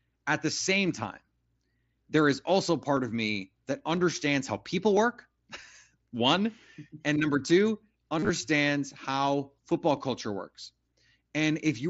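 Voice packets between the Bluetooth headset and phone dropped out from 8.19 to 8.29 s, just after "one and number two", and the receiver covered the gaps by repeating recent waveform. This concealed Bluetooth headset packet loss leaves about 83 ms of this speech replaced by a buzzy, held tone, with runs up to 38 ms and a slight warble as real audio resumes, heard through the mSBC codec's 8 kHz wideband limit.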